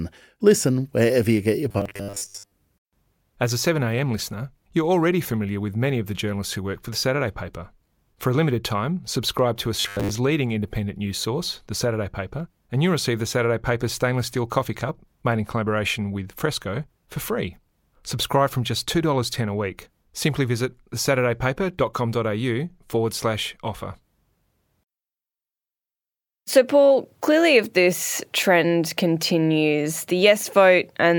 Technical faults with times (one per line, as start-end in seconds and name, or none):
1.70-2.52 robotic sound from repeated short buffers
9.80-10.12 robotic sound from repeated short buffers